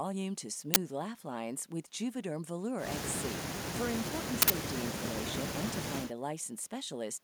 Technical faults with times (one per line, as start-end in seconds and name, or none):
0.74-0.76 uninitialised buffer
4.42-4.50 uninitialised buffer